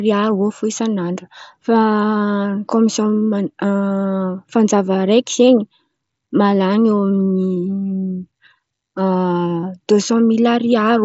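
No technical faults detected.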